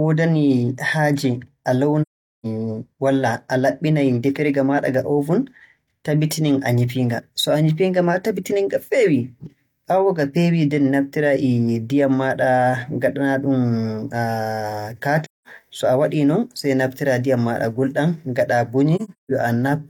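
At 2.02 s the speech drops into silence until 2.46 s, again from 15.24 to 15.47 s, and once more from 18.96 to 19.32 s, where the gaps are scattered, the longest near 150 ms. This is AAC frame loss with muting. Missing frames were decoded as zero spectrum, and overlapping windows fade each edge over roughly one frame. That soft entry and exit separates it from a hard sample dropout.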